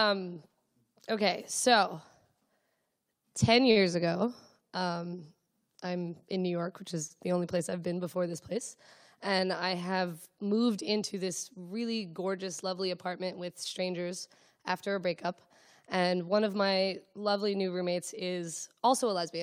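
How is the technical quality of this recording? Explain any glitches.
The recording has two timing glitches, both from the network jitter buffer.

At 7.07 to 7.12 s there is a short stall from a late packet. The buffer ran dry, so the receiver stretched the last sound by 27 ms and resumed without loss. It is heard as a brief held sustain. On a spectrogram the harmonics run flat and smeared, and the waveform shows repeated cycles.

From 16.19 to 17.13 s a jitter buffer speed-up plays the audio at about 108% speed. The receiver drained excess buffered delay by cutting out pitch-period slices, around 70 ms in total. The sound is hurried but unchanged in pitch. A spectrogram shows compressed timing with intact harmonic spacing, and the waveform shows small splice joins.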